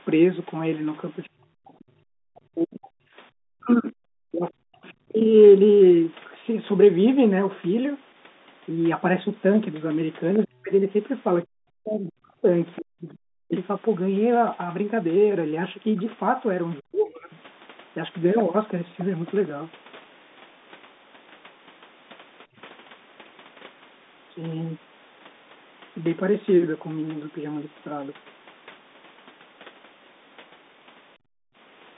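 From 1.34 to 5.35 s, 10.45 to 13.51 s and 16.8 to 17.32 s, the speech sinks by up to roughly 40 dB. This is likely speech suppressed in double talk, where the canceller turned down both voices at once. The other side's voice leaks through at 12.76 to 13.58 s almost as loud as the talker. Faint scraps follow at 15.97 to 16.02 s, 17.33 to 17.41 s and 22.53 to 22.62 s, likely residual echo. At 31.15 to 31.56 s the room tone drops by about 40 dB and returns. The echo canceller gated the background.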